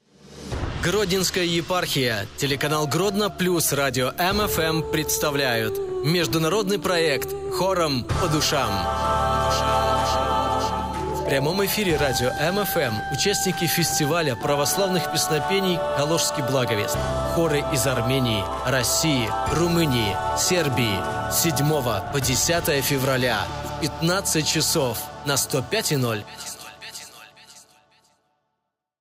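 Nothing technically wrong turns up in this audio; no dropouts, glitches, distortion or level problems to report.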